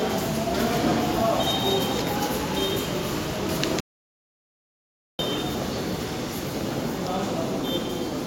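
At 3.80 s the sound cuts off abruptly mid-flow and returns just as suddenly at 5.19 s: an audio dropout to silence lasting about 1.39 s. The gap holds no room tone at all, so whatever occurred in that stretch is simply missing. The cause was likely a lost input, with the recorder carrying on writing zeros. On a waveform the trace collapses to a flat line between those times. A spectrogram shows a clean black vertical band across every frequency.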